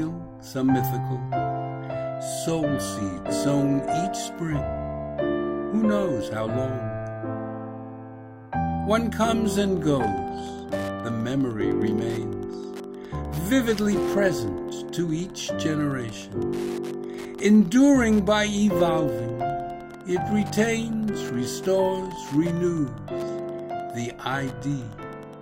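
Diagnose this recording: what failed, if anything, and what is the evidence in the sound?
Wi-Fi interference entered at the analogue wiring: from 9.41 s to the end, a steady tick repeats every 102.4 ms, roughly 25 dB below the signal. The circuit rectifies a nearby radio's beacon bursts. On a spectrogram these show as evenly spaced broadband vertical lines, and on the waveform as regular small spikes.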